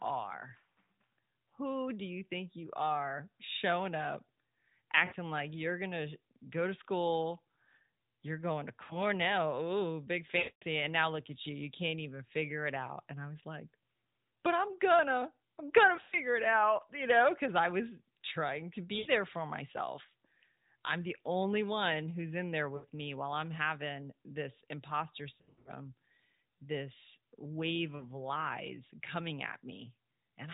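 Lost AMR speech frames interrupt the speech at 5.06, 8.84, 10.38, 15.96, 18.98, 22.76, 25.34 and 27.96 s. Each time, frames failed their checksum and the decoder reused the last good pitch and vocal tract settings at falling gain. The 40 to 100 ms gaps sound like short warbles or smeared dips. The 240 ms loss at 10.38 s stretches into a drawn-out fade before the speech returns rough, while the 240 ms at 25.34 s is scattered over 320 ms in runs of at most 80 ms. All of this rides on the band-limited 4 kHz sound of the narrowband codec.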